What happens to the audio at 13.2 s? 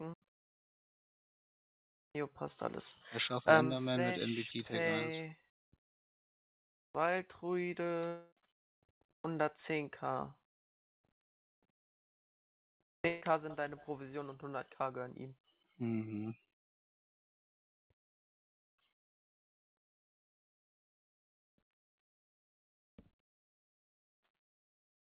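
A burst of packet loss runs from 13.08 to 13.23 s. Several packets in a row never arrived in time to be played. The receiver filled the gap by carrying the last sound forward for about 140 ms and letting it fade. You hear a held, dimming smear instead of fresh sound. Playback then picks up later, with roughly 140 ms of the original audio skipped. The surrounding sound stops at 4 kHz, which fits a narrowband telephone codec.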